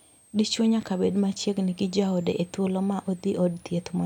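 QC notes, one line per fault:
Throughout, switching supply whistle: a switching power supply near the signal path is running at a switching rate low enough to fall in the audible band, and its noise couples into the audio as a thin, high whistle sitting under the speech, roughly 35 dB below it. The tone wanders between about 7.27 kHz and 9.75 kHz as the supply's operating point shifts, so it is heard as a faint, moving whine.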